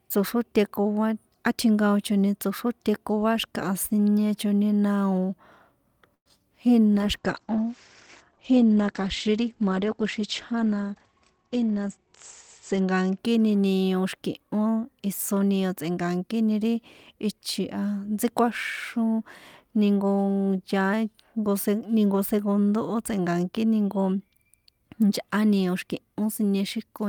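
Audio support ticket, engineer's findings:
Call audio freeze, 6.14 to 6.27 s. Likely a packet delivery stall draining the jitter buffer. Receiver extends the last sound as a fading buzz, then about 70 ms of silence. Playback resumes where it stopped: 114 ms gap inserted, delay up 114 ms, nothing lost.

Short concealed packet loss, 6.29 s. About 10 ms of audio missed the decoder deadline. Receiver covers the hole by extrapolating the preceding sound and crossfading back. Heard as a brief smear or wobble right after the freeze.

Call bitrate drop, 6.93 to 13.25 s. Bandwidth estimate collapsed and the Opus encoder fell from 48 to 16 kbps, bottoming out for 5.97 s. Audio bandwidth narrows from 20 kHz to 8 kHz. Result is rough, muffled speech with coarser coding until recovery.

Jitter buffer speed-up, 10.95 to 12.06 s. Buffer overfilled, so the receiver trims repeated pitch-period-length slices to reduce latency, roughly a tenth of a second in total. 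Speech runs at 108% speed with unchanged pitch and sounds hurried. Overlaps the low-bitrate stretch.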